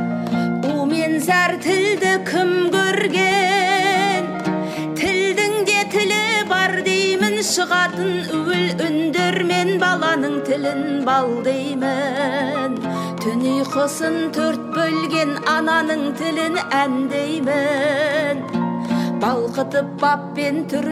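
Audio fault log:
3.32 s, corrupt FLAC frame: a brief disturbance peaking at about -14 dBFS. Flipped bits in the compressed data went undetected, so the decoder's linear predictor rebuilt samples from wrong coefficients or residuals, and the error compounded. The disturbance is short, which fits damage reaching a few consecutive frames. The next intact frame decodes cleanly, so the disturbance ends abruptly rather than fading.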